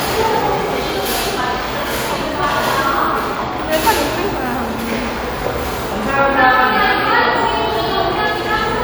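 No technical faults turn up anywhere in the recording; the sounds run unbroken and intact throughout.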